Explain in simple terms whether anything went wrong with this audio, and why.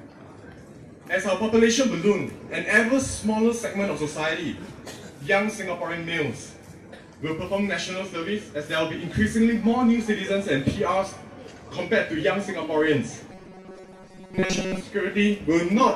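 From 13.32 to 14.83 s the sound turns into a steady metallic buzz at 188 Hz. This is robotic sound from repeated short buffers, likely from audio arriving too slowly and about 5 ms chunks repeating to cover most of that span. Unlike a dropout, there's no silent gap, only the rigid hum.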